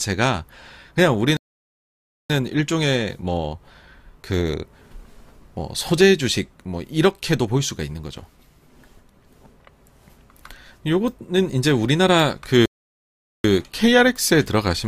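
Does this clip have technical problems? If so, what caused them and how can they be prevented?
Yes. There are two playback stalls. The sound cuts out mid-flow from 1.37 to 2.30 s, a gap of about 0.93 s. It cuts out again from 12.66 to 13.44 s, about 0.79 s. Both gaps are true silence, not a fade. The likely cause is the player starving for data or having its audio thread blocked, so nothing reached the output until it recovered. A larger playback buffer and keeping the audio thread free of blocking work would prevent this.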